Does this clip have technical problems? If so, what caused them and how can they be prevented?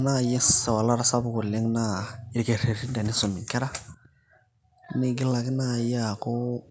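No, there are no technical problems to fix in this speech clip. It has passed through a call's microphone processing, so the lowest bass is trimmed and nothing is heard above 8 kHz, which is expected and not a fault.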